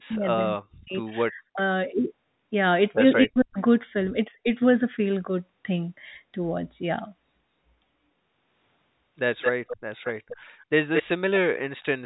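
A speech recording from a call, with two kinds of fault. The echo canceller likely could not separate this talker from the far side during double talk, so speech suppressed in double talk turns the voice down hard, by roughly 40 dB at 0.0–0.94 s, 1.24–1.59 s and 3.24–3.58 s, and more mildly at 4.28–4.47 s. Later an echo leak, likely from a loudspeaker whose echo canceller let some pickup through, returns a delayed copy of the voice 222 ms behind it, at 9.41–9.77 s, 10.03–10.37 s and 10.94–11.03 s. The copy is loud in the first and last stretches and fainter in the middle one. All of it is carried over G.711 telephone coding, so nothing above 4 kHz is heard.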